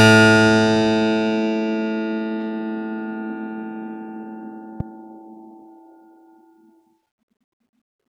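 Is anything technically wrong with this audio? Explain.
Yes, there is one fault. A single loud pop from 4.80 to 4.83 s, likely a voltage pulse from a switch, plug or static, jumps roughly 10 dB above the music. Unlike a dropout, the music continues uninterrupted beneath it.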